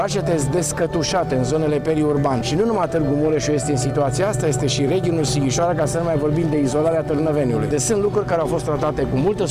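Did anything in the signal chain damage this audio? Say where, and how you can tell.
No damage anywhere in the chain.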